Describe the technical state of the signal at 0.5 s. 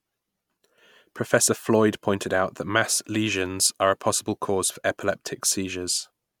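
At 0.5 s the signal is intact, with no audible fault at that moment.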